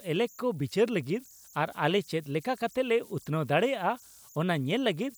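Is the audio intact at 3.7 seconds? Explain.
No, converter idle tones run through the whole clip, including 3.7 s. A delta-sigma converter working without dither settles into repeating bit patterns on quiet input, producing a whistle around 7 kHz, about 30 dB below the speech, audible in pauses and as grain.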